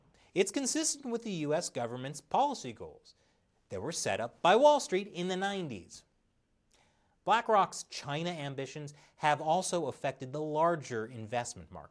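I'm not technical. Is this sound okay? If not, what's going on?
Yes, the sound is in good technical shape, with nothing in it that points to a problem with how it was captured, processed or delivered.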